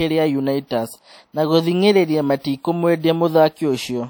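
Throughout the speech, the audio extends to a cut-off near 20.1 kHz, as high-bitrate MP3 would, yet carries the artefacts of a much coarser codec. That points to low-bitrate audio saved at a high bitrate, likely a roughly 48 kbit/s WMA file re-encoded to MP3 around 256 kbit/s. A single low-bitrate encode would sound much the same, since the second encode adds almost nothing.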